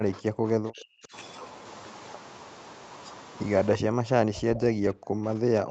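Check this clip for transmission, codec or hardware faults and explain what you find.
Two faults are audible in this speech clip. From 0 to 1.14 s and from 3.74 s to the end, the voice drops by up to about 40 dB. This is likely speech suppressed in double talk: the echo canceller mistook overlapping talk for echo and turned it down. From 4.55 to 4.59 s there is a brief echo leak, probably from an echo canceller missing loudspeaker pickup. It sounds like a faint copy of the voice, delayed by 331 ms and about 20 dB below the speech.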